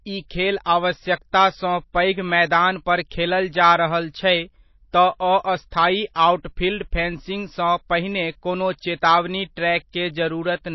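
Throughout the speech, nothing is heard above 5.8 kHz. The codec damage is plainly audible. The sound is watery and swirly, and consonant attacks smear. The likely cause is MP3 compression at a low bitrate, which fits about 24 kbps. The encoder drops weak frequency lines and cuts the treble.

At 6.14 s there is pre-echo. A short hiss spreads over about 20 ms before a sharp attack, which sounds soft. The codec spread its quantisation noise across the block, so noise sized for the loud onset also filled the quiet moment before it.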